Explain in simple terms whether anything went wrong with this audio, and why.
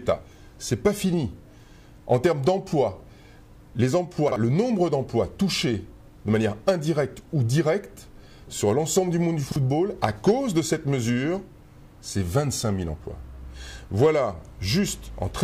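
Chunks out of order at 4.28 and 9.48 seconds. Each time, a 40 ms piece arrived late and played after the next one, causing a brief jumbled moment.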